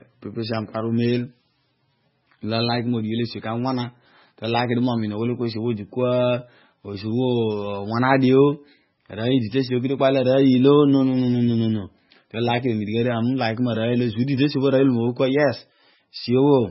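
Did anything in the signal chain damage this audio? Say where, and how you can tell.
Yes. Throughout the speech there is a hard ceiling at 5.6 kHz, and the sound is watery and swirling, with metallic chirps on sibilants and smeared onsets. The stage is the codec, likely MP3 compression starved of bits, which fits a bitrate around 16 kbps. On a spectrogram the energy stops flat at 5.6 kHz, and weak bands flicker on and off between frames as the encoder drops them.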